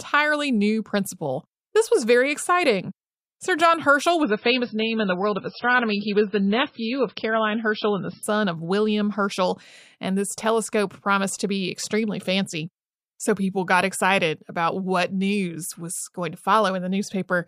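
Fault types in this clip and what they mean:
Adaptive stream at a lower bitrate: From 4.23 s to 8.23 s the speech suddenly loses everything above 5.6 kHz and takes on a smeared, watery codec texture, then snaps back to full quality. The four-second stretch is consistent with the player stepping down to a much leaner MP3 version, roughly 16 instead of 128 kbit/s. Unlike a dropout or buffering stall, the audio never breaks or pauses. Unlike a fixed low-pass filter, the dullness comes and goes at clean switch points.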